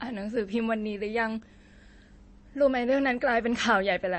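Throughout, the speech has a watery, swirly quality with nothing above 8.3 kHz. Likely MP3 compression at a low bitrate, around 32 kbps.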